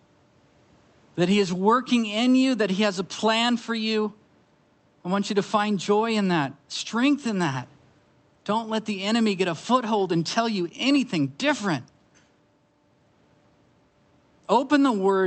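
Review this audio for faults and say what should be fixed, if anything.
No faults; nothing needs fixing.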